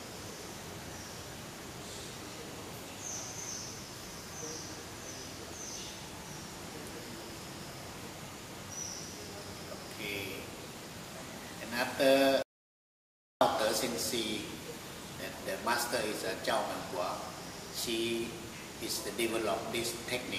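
An audio dropout to silence runs from 12.43 to 13.41 s, removing just under a second of sound. The audio stops abruptly mid-flow and the gap is silence with no room tone. The input was likely lost briefly while recording continued writing zeros.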